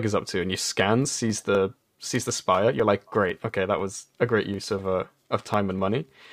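From 0.30 s to 6.04 s, a tick recurs every 0.25 s: periodic USB or driver dropouts. Each time, a background task stalls the audio path and roughly half a millisecond of signal is skipped outright, leaving an evenly spaced splice click, around twenty in all.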